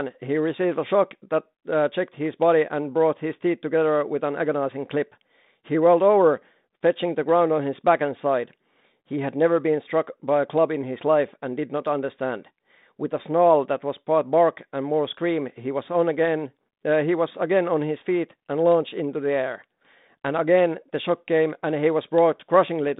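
No technical faults are audible anywhere in this recording.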